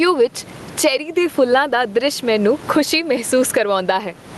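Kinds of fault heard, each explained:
DC offset: The whole waveform sits shifted off the zero line by a constant amount, all the way through the speech. You can't actually hear it, but it eats into headroom on one side and shows up as a steady lump of energy right at the bottom of the spectrum.
Gain pumping: The level keeps lurching, with swings of around 20 dB. Between phrases the room noise sits about 30 dB below the speech. Loud and soft passages end up squashed closer together. The likely cause is input gain cranked far too high for the mic, with a fast limiter or compressor clawing it back on every peak.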